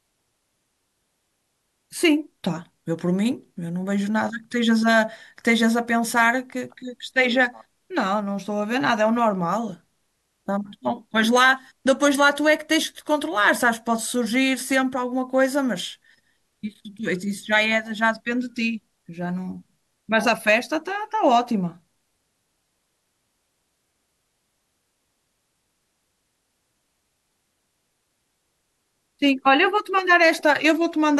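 No technical faults are audible anywhere in the recording.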